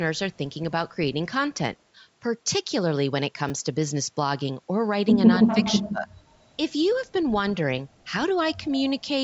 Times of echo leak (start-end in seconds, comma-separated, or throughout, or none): 5.43-5.82